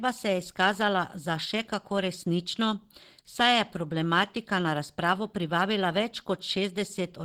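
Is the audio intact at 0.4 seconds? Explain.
No. At 0.4 seconds, as throughout the clip, the speech sounds hoarse, grainy and rough, with plainly audible damage. The likely cause is Opus compression at about 16 kbps in its hybrid speech mode, which rebuilds detail coarsely when bits run short.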